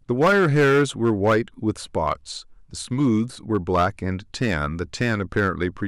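The speech is hit by hard clipping six times. The worst run is from 0.11 to 1.37 s. There the level drives about 9 dB past full scale, and the peaks are sliced flat. That gives a harsh fuzz on the loud parts. Shorter bursts follow at 2.08 to 2.12 s (about 3 dB) and 3.00 to 3.08 s (about 2 dB). These are brief crackles. Then come 3.55 to 3.87 s, 4.42 to 4.54 s and 5.01 to 5.49 s, each about 5 dB over. The flattened tops add gritty high harmonics.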